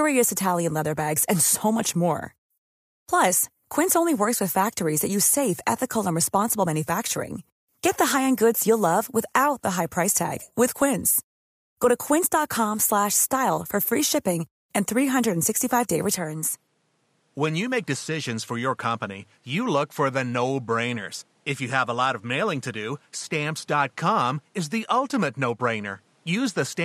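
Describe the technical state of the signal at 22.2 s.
At 22.2 s the speech sits inside a stretch from 16.17 s to the end that sounds like the input switched to a poorer device, likely. There's no gap at the switch, but nothing comes through above 12.5 kHz, it's about 5 dB quieter, and there's a new noise floor roughly 40 dB down.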